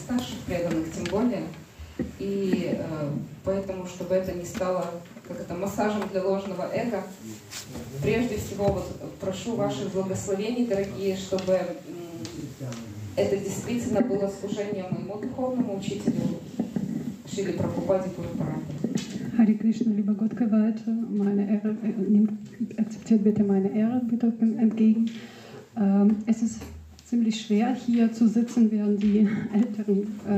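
At 12.40 s, fresh audio failed to reach the output in time, so the device played its previous buffer a second time, a repeated buffer. The repeated piece is about 46 ms long, which fits a 2048-sample buffer, and it sounds twice in a row, through 12.45 s, with a hard join where the copy begins. The result is a brief stutter or doubled blip rather than a gap, and essentially nothing seems to drop out.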